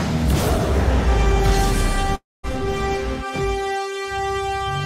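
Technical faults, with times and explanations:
2.15–2.46 s, long network dropout: the sound breaks off and the last moment is stretched into a buzzing tail that decays, leaving about 210 ms of near-silence before audio resumes at 2.46 s. About 280 ms of material is simply gone, so the return is abrupt and skips ahead. The cause is likely a run of lost packets, with the receiver's concealment repeating the final fragment until it gave up and muted.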